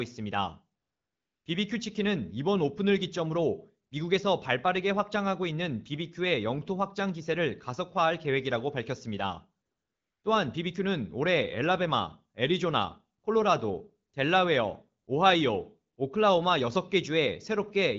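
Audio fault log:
0.81–1.45 s and 9.65–10.23 s: AMR comfort noise. The phone judged the talker silent and sent no speech frames, so the receiver synthesised a smooth, steady hiss in place of the real background.
3.89 s, 13.19–13.23 s, 14.09–14.13 s, 15.03–15.07 s, 15.93–15.97 s: AMR comfort noise. The same substitution occurs in 20 to 40 ms dropouts that briefly swap the real background for the synthetic noise.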